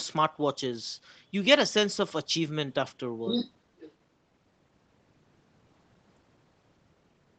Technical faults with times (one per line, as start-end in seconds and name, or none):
3.26-3.52 other side's voice leaking through
3.78-3.92 other side's voice leaking through